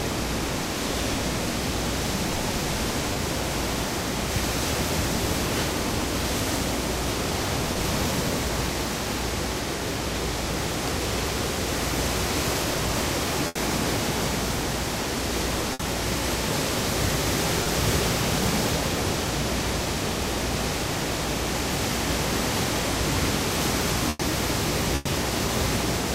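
Short concealed packet loss appears at 3.13–3.17 s and 7.73–7.77 s. About 20 ms of audio never arrived, and the receiver bridged the hole by extending the preceding sound. The result is a tiny smear or wobble rather than an audible gap.

A burst of packet loss follows at 13.47–13.57 s (80 ms lost) and 15.73–15.81 s (60 ms). Here several packets in a row went missing. The concealment holds the last sound and lets it fade as a buzz or hiss, then the audio resumes with that stretch skipped.

Another short concealed packet loss falls at 17.63–17.67 s. Like the first two, it is a single 20 ms patch, too short to fade and brief enough that only a transient might vanish. That sets it apart from the longer bursts.

Two final bursts land close together near the end, at 24.09–24.21 s and 24.95–25.07 s, each losing 100 ms. They never drop to silence. The held, decaying fill is clearly longer than the short losses, and a 100 ms piece of the sound goes missing each time.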